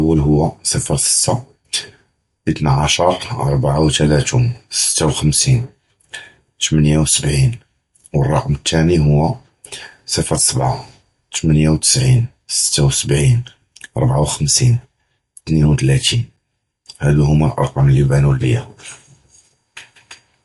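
MP3 compression runs throughout: nothing above 11.3 kHz and plainly audible codec damage, likely an encoder short of bits, fitting roughly 50 kbps.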